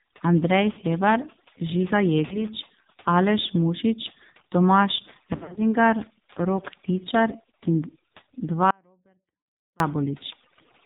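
Speech clip with overdone noise removal throughout: the background drops and breaks up into twinkling specks, and quieter parts of the voice are removed along with it. The whole clip also passes through the AMR narrowband mobile codec with heavy damage. Nothing above 4 kHz survives, and the voice is buzzy and synthetic, which fits a low-rate mode near 5.9 kbps. Lost AMR speech frames appear at 0.72–0.78 s and 2.26–2.46 s, each a brief concealed dip or warble consistent with a couple of missing frames. A heavier cluster spreads across 5.36–5.60 s, where scattered losses leave the sound drawn out with falling gain, the longest run lasting about 60 ms. From 8.71 to 9.80 s the sound cuts out abruptly, leaving only a faint residue roughly 40 dB below normal level. This audio dropout to a faint residue is likely a loss of the signal upstream while the path after the break stayed live.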